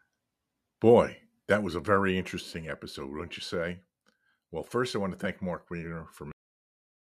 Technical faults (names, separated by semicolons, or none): cut-off end